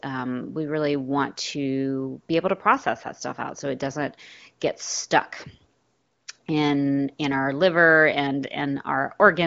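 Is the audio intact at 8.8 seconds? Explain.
Yes, the audio at 8.8 seconds is intact, with no fault at that moment.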